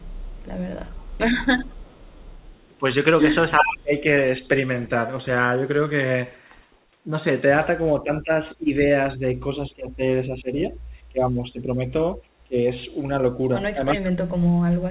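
From the very start to 2.67 s there's a faint echo leak: a copy of the speech trailing 378 ms behind, sitting about 30 dB under the direct sound. The far end is likely playing the call on a loudspeaker, and its echo canceller isn't scrubbing out everything the mic picks up, so a ghost rides along. At 2.69 to 2.83 s the talker briefly ducks by around 15 dB for about a tenth of a second. That's speech suppressed in double talk, likely the canceller clamping down because it can't tell the local talker from loudspeaker echo while both sides are active.

Things get messier around 3.57 to 3.78 s. The echo jumps to roughly the same level as the speech itself, still 378 ms late, and from 3.6 to 4.05 s the real speech gets pushed down by about 25 dB for most of that stretch.

Between 8.03 and 12.57 s the speech keeps dipping by about 15 dB in pieces, adding up to roughly two seconds of chopped, pulled-back sound. 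From 13.72 s to the end it drops hard, around 40 dB, nearly vanishing. Meanwhile a 378 ms echo slips through at 13.92 to 14.11 s, about 15 dB down.

Throughout, the call path itself carries nothing above 4 kHz, which fits a narrowband G.711-style codec.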